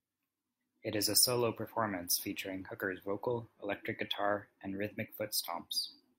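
Listening to the speech recording, nothing technical stood out at any point.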